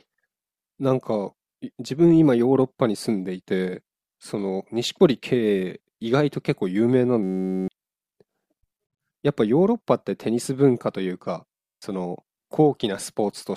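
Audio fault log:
7.23–7.68 s and 11.55–11.82 s, system hang loop: each time the playback freezes on one 10.67 ms slice of sound and repeats it exactly, 42 times in the first burst and 25 in the second. The loop length fits a 512-sample buffer. Because the slice is so short, it fuses into a steady buzz at about 93.8 Hz rather than a stutter. The looping is identical, so the buzz stays pitched and mechanical, not silent like a dropout. Roughly half a second, then about a third of a second, of sound is lost.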